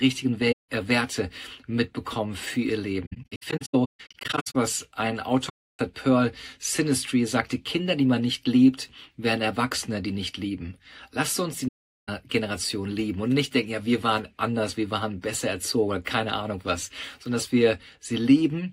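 AAC frame loss with muting: the decoder zeroed the spectrum of the missing frames, so the overlapping windows fade the sound out and back in, leaving soft-edged silent holes at 0.52–0.69 s, 5.49–5.79 s and 11.68–12.09 s, plus scattered dropouts from 3.05 to 4.56 s, the longest around 150 ms.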